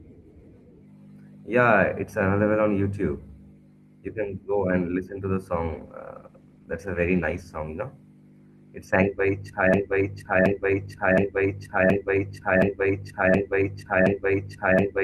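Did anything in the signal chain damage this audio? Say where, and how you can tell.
Yes. A call bitrate drop runs from 5.68 to 7.63 s, between "and listen to the" and "you know". The network's bandwidth estimate fell and the codec went from 32 to 14 kbps for about 1.9 s, coding coarsely and trimming highs, so the sound turns muffled and rough.

A broken-record loop starts at 9.74 s and runs to the end: a 0.72 s fragment repeats exactly, back to back. This likely comes from a playback or stream stall that kept re-sending its last buffered piece, so the audio after 9.74 s is lost.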